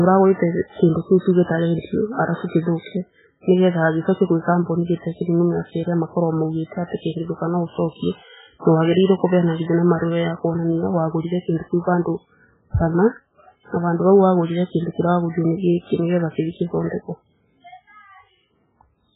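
Speech, and the whole thing sounds like low-bitrate audio saved at a high bitrate: nothing above 3.8 kHz, smeared MP3 artefacts, likely a very low-rate MP3 re-encoded much higher.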